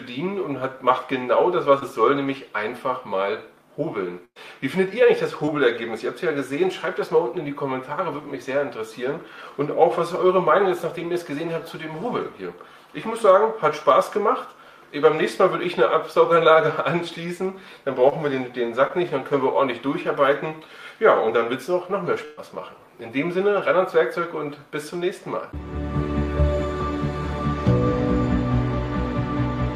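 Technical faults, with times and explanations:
1.79 to 1.83 s, 5.46 to 5.49 s, 18.09 to 18.13 s and 18.87 to 18.91 s, short concealed packet loss: each time about 20 ms of audio failed to arrive, and the receiver covered it with roughly 15 to 19 ms of sound extended from what came before, repeating its pitch or shaped noise, then cross-fading back. Each is heard as a tiny smear or wobble. On a spectrogram, harmonics run briefly flat and overly regular; the waveform shows a short repeated cycle.
4.25 to 4.38 s and 22.25 to 22.39 s, burst of packet loss: about 100 ms and then 120 ms went missing in a row. The receiver prolonged the last sound for about 107 ms and 122 ms, fading it as the gap grew, so it turns into a held buzz or a dying hiss before the audio resumes further on, with the missing part skipped. At 4.25 s the fill decays into about 60 ms of silence, which shows on the spectrogram as a frozen, fading band and then an empty column, and in the waveform as an envelope tapering to flat. 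At 22.25 s the fade never reaches silence.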